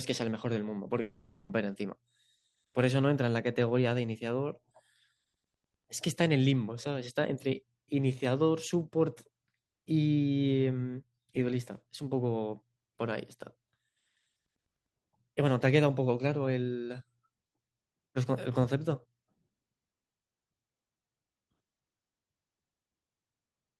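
At 1.01 s the speech breaks off for half a second, until 1.51 s. This is a long network dropout. The likely cause is that no audio arrived for that stretch, so the receiver filled the gap itself. It carries the last sound on as a buzzing, hissy tail that fades. The fill covers the whole gap, so no true silence is heard. The speech then resumes at 1.51 s, and the lost half second never returns.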